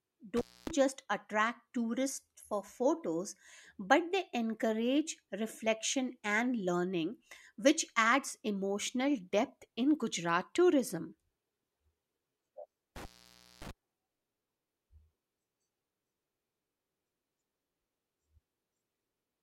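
The speech drops out twice, at 0.37 to 0.71 s (about 260 ms open) and 12.96 to 13.71 s (about 570 ms open), with crackle at the edges and faint hiss between: an intermittent contact, a loose cable or plug briefly opening.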